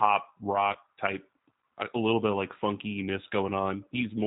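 Right from the start it's G.729 at 8 kbit/s: nothing above 4 kHz, and the speech has that rough, slightly synthetic edge of a low-rate pulse-coded model. Then from 0.73 to 0.77 s, just before "type a little bit", there's VoIP packet loss concealed by the speech codec: a 20 ms gap, which fits one lost packet, gets filled by a brief fading buzzy tone or coloured noise, and the voice stays weak or distorted coming out of it.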